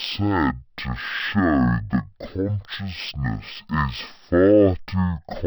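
From start to finish the speech plays at half speed and a full octave low, with a faint mirrored copy in the upper spectrum. This is stereo read as mono: interleaved left and right samples were played consecutively as one channel.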